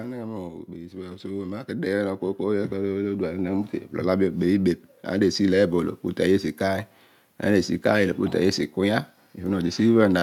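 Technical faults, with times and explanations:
0.74 to 4.43 s, automatic gain rising: the gain control judged the input too quiet and slowly raised the level by about 8 dB over nearly four seconds. The background noise swells along with the speech, which separates this from a talker simply speaking louder.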